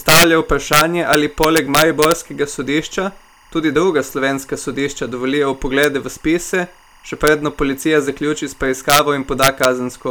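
Timecode bleed runs under the whole speech clip. Linear timecode from a nearby line is leaking in. It is about 35 dB below the speech. It switches between tones near 1 and 2 kHz at 24 frames per second. It sounds like a steady chirping warble.

Integer overflow strikes at 0.09 to 0.24 s and from 0.73 to 2.12 s, just before "sodišča tudi druga slovenska". It strikes again at 5.83 s, after "druga slovenska sodišča dovolijo", and at 7.27 s, after "v spise še". Later bursts come at 8.90 to 8.99 s and 9.43 to 9.65 s. Loud peaks, pushed up to about 5 dB past the limit, wrap to the opposite sign instead of clipping. Each one gives a violent crack, far harsher than clipping.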